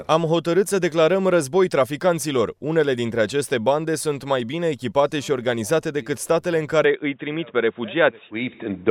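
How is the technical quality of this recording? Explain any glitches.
There is one glitch. From 6.85 s to the end, the sound turns dull and boxy, with nothing above 3.8 kHz, and a faint new noise floor. This is likely an input switched to a poorer device, with no gap and no clear level jump.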